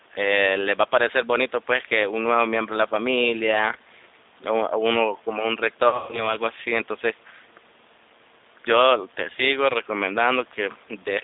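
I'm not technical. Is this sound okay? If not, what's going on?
No, it has two problems. The whole clip went through the G.729 codec, a squeezed phone-call format that rebuilds the voice from a rough model. You can clearly hear it: the speech sounds thin, a bit rough and synthetic, like an old internet phone call.

Then, from about 5.89 to 6.35 s, there's VoIP packet loss concealed by the speech codec. Chunks of the call went missing, the longest gap about 120 ms, and the decoder filled them by guessing, so the voice gets stretched into a buzzy tone or a hissy noise that fades before recovering.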